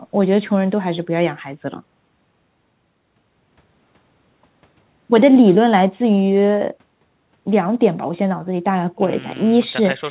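Nothing stood out as a technical problem on listening to this speech recording.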